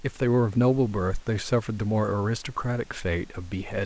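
No technical fault can be heard in this speech recording. The band stops at 8 kHz, which fits the G.722 codec of a call path, and a low room noise sits about 34 dB below the speech.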